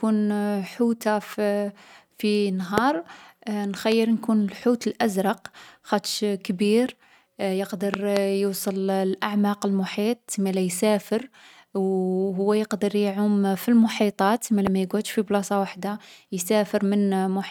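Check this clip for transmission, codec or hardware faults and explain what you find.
There are loud pops in this speech, four events in all. Short single pops hit at about 2.78 s, 3.92 s and 14.67 s, and a double pop runs from 7.94 to 8.19 s. The speech carries on underneath each one. The peaks stand well clear of the speech, roughly 10 to 20 dB above it, with the ones at 2.78 s and around 8 s the strongest. Each sounds like a sharp thump laid over the audio. That's likely a sudden voltage step or pulse getting into the signal chain, from a plug, a switch or static discharge, and the circuitry after it shapes it into a brief click.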